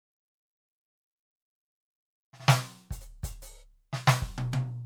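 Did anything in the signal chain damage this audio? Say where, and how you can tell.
No, nothing in the chain seems to have done any harm here, and this bit of music comes across just as it ought to.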